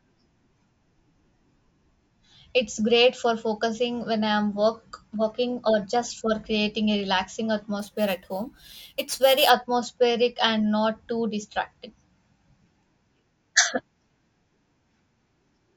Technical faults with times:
7.79-9.50 imaging from sample-and-hold upsampling

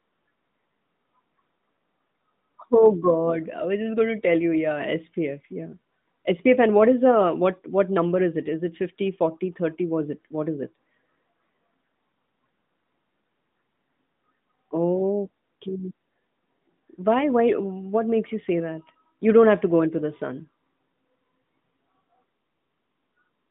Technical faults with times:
none

